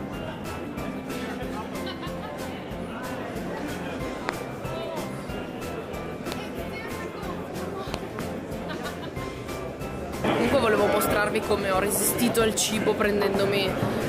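You've got loud pops here, three events in total: one at 4.29 to 4.31 s, another at 6.32 to 6.34 s, and a double pop spread over 7.94 to 8.21 s. Each one jumps out at something like 20 dB above the audio, a sharp thump sitting on top while the sound carries straight on underneath. That points to a likely sudden voltage step or spike, from a plug, switch, static discharge or driver glitch, getting into the signal chain and being shaped into a brief pulse.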